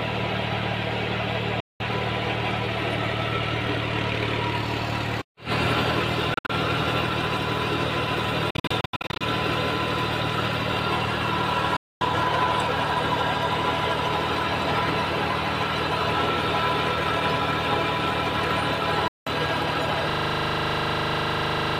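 Silent gaps with abrupt edges cut the sound at 1.60 to 1.81 s, 6.34 to 6.51 s (broken into several short holes, the longest about 61 ms), 8.50 to 9.23 s (scattered holes), 11.76 to 12.02 s and 19.08 to 19.28 s. These are likely a Bluetooth dropout, where late packets were discarded. After each gap the sound resumes further along, as though it had kept playing. From 20.10 s to the end, a system hang loop repeats one 40 ms slice about forty times. The ring buffer kept cycling while the system froze, producing a rapid, rattling stutter at 25 Hz.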